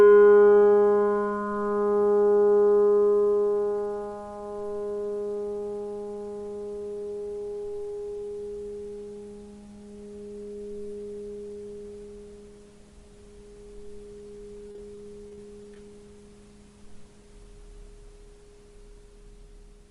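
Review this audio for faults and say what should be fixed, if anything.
Repeated packet loss (robotic sound) runs from 14.67 to 15.76 s: around eight short gaps, the longest 30 ms, were each patched by extending the preceding sound, so about 11% of that stretch is concealed. The result is choppy audio with fragments missing. To prevent it, stabilise the network path and give the receiver a larger jitter buffer so late packets still arrive in time.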